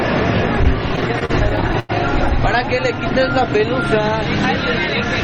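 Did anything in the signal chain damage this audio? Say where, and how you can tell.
Yes, there's a run of repeated stalls (stutter) on the network side, between 0.89 and 1.91 s: thirteen little hitches where the jitter buffer ran dry and the receiver stretched the last sound. The longest is 94 ms, and nearly a quarter of that stretch is filler.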